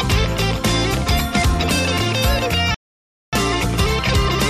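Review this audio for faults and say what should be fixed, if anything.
A playback stall cuts the sound from 2.74 to 3.33 s, about 0.58 s of silence. The likely cause is an emptied player buffer or a blocked playback thread. Prevent it with deeper buffering and a playback thread that nothing else can block.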